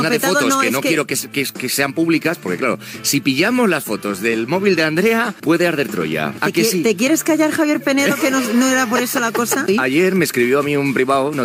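Nothing in the audio stood out as a technical problem on listening.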